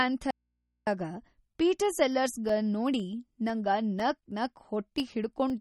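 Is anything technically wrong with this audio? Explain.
Yes, there are three distinct faults in this speech clip.

Throughout, the speech shows plainly audible damage that is likely from MP3 compression. Nothing is present above 11.8 kHz, which fits a low bitrate of around 33 kbps. At that rate the encoder cuts the treble and discards weak frequency detail, so the speech sounds watery and swirly, with metallic chirps on sibilants. On a spectrogram the energy stops at a flat horizontal ceiling, and the area below it is broken into flickering patches.

From 0.31 to 0.87 s, the speech abruptly vanishes for about 561 ms, in an audio dropout to a faint residue. The wanted signal was likely lost, but the path after it stayed live, so the gap holds only mains hum about 50 dB below the speech. The waveform collapses to a thin low-level band with hard edges at both ends, and the spectrogram keeps only narrow horizontal hum lines.

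From 2.49 to 5.5 s, short ticks recur every 0.5 s, about seven in total. These are periodic USB or driver dropouts. A stall on the bus or in the driver at a fixed interval drops roughly a millisecond of audio each time and fills it with silence. The waveform shows tiny evenly spaced notches, and the spectrogram shows thin vertical broadband lines wherever speech is present.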